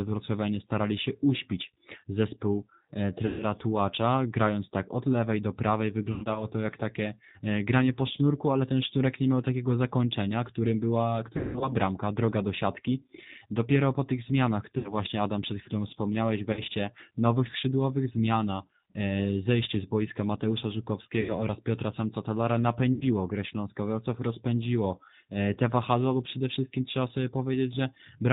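Throughout, the speech sounds band-limited, slightly rough and synthetic, with nothing above 4 kHz. This is the G.729 codec: at 8 kbit/s it rebuilds each 10 ms frame from a vocal tract filter, a pitch predictor and a handful of pulses rather than the waveform itself, so fine detail is traded away and the damage is plainly audible.

At 3.26 to 3.43 s, 6.12 to 6.46 s, 11.37 to 11.73 s, 14.78 to 14.94 s, 16.53 to 16.61 s, 21.21 to 21.45 s and 22.93 to 23.03 s, the sound smears into a buzzy tone or coloured noise that fades, and stays weak for a moment afterwards. This is VoIP packet loss concealed by the speech codec. The decoder stretched its last pitch and filter across the gaps, lowering the gain frame by frame. About 140 ms is missing in the first burst, 140 ms across 240 ms in the second, and 200 ms in the third, with a 180 ms run that is the longest. The remaining gaps total 40 to 80 ms each.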